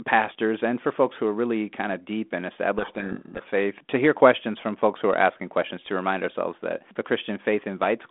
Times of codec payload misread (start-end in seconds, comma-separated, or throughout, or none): 2.78-3.49